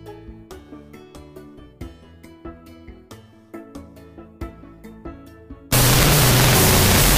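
From about 5.73 s to the end at 7.18 s there's a wrong sample width fault: 16-bit data got read as unsigned 8-bit, so each byte becomes its own sample. You get harsh, loud noise with the sound buried underneath, running at half speed and an octave low.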